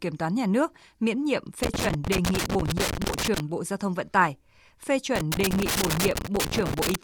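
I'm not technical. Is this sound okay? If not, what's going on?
No. Loose connector crackle appears from 1.63 to 3.40 s and again from 5.16 to 6.95 s: a worn or dirty plug contact keeps breaking and reconnecting, chopping the speech into irregular scratchy crackles while the cable moves.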